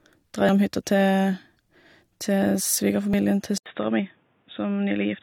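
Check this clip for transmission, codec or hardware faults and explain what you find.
Two kinds of fault are audible in this speech: three dropped buffers and a switch to a poorer input device.

Dropped buffer (overrun) at 0.49 s, 3.14 s and 3.99 s: the recording software likely failed to collect its samples before the hardware overwrote them. Each gap is spliced shut, giving a forward jump, roughly 70 ms lost at 0.49 s and about 20 ms at the other two.

Input switched to a poorer device at 3.58 s, lasting to the end: the system likely changed microphones mid-recording. After an 80 ms silence, the band narrows, so the speech turns dull and boxy. It is also about 5 dB quieter, with new background noise about 40 dB below it.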